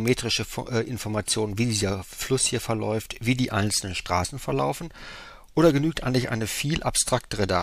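There are no technical faults to describe in this audio.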